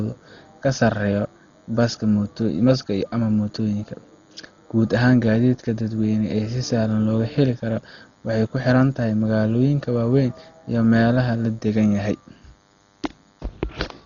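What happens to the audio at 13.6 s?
At 13.6 s a thin, steady buzz sits under the speech, as it does for the whole clip. This is DECT cordless phone buzz. A nearby handset or base sends radio bursts every 10 ms. The audio circuit rectifies them into a 100 Hz tone with many harmonics, quiet and far below the speech.

The speech also sounds dull and rough at this moment, and throughout. Nothing is heard above 6.9 kHz. A grainy, fluttering noise clings around the voiced sounds. The likely cause is heavy Dolby Digital compression at a very low bitrate. The encoder narrowed the band and left many frequency lines without detail. The decoder then filled those lines with noise.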